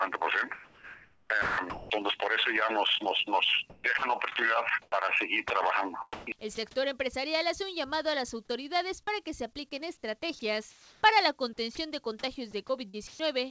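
From 0.54 to 1.90 s the sound is chopped by the voice detector. The sender likely gated the signal on and off. About 1.12 s of it becomes flat comfort noise, so the sound stutters. The same choppiness returns from 3.70 to 4.92 s, with about 0.32 s filled. At 5.48 s, sound is dropped by the voice detector. A 20 ms slice is likely misjudged as background and replaced by noise, giving a tiny gap. From 6.13 to 6.57 s, comfort noise stands in for the background. The transmitter likely paused sending. About 160 ms of real ambience turns into steady, featureless hiss. At 6.55 s, inside that stretch, another 20 ms is dropped. Chopping recurs from 10.39 to 11.77 s, about 0.4 s filled, and from 12.51 to 13.19 s, about 0.2 s filled. Across the clip the call codec leaves nothing above 8 kHz.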